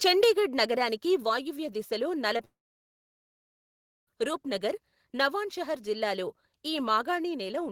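From 0.07 to 0.28 s the loudest syllables take on a harsh, crackling edge, with the tops of the waveform flattened about 4 dB above the ceiling on roughly 2 percent of samples. This is microphone overload: the input level was likely set too high, so the converter could not represent the peaks and cut them off. The squared-off tops add the gritty distortion heard on the opening speech.

At 0.24 s, still inside that distorted stretch, the speech and the background both drop by about 2 dB in a single step. This is the microphone volume stepped down. The likely cause is the call software reacting to the clipping and turning the device's input gain down at once. The whole signal therefore sits lower from that point, rather than fading.

Between 2.37 and 2.41 s there is a brief smear in the sound, lasting about 20 ms. This is short concealed packet loss. That slice of audio did not reach the decoder in time, so the receiver covered about 16 ms of it by extending the preceding sound and then blending back into the real signal. 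A gap this short comes across as a momentary wobble rather than an audible hole.

Shortly afterwards, from 2.45 to 4.09 s, the speech is replaced by a short continuation of the last sound that fades within a few hundredths of a second. About 1.56 s of silence follows. Speech then resumes further on, without the missing stretch. This is a long network dropout, likely caused by no packets arriving for about 1.62 s. The receiver's concealment could only extend the sound briefly before giving way to silence, and the audio from that interval was never played.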